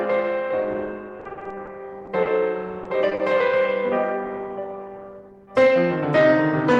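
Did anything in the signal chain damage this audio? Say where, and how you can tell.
Yes. The network dropped packets repeatedly from 1.19 to 1.69 s, eight gaps, the longest 50 ms. That repeated packet loss left the music choppy with pieces missing, with over a third patched.

A late packet emptied the jitter buffer at 2.05 to 2.09 s. In this short stall, the receiver stretched the last sound of the music for 20 ms, holding it slightly too long without losing anything.

Packets also went missing at 2.23, 2.83, 3.09 and 3.15 s, each 20 to 40 ms. These short concealed packet losses leave brief smears where extrapolated sound replaces the music.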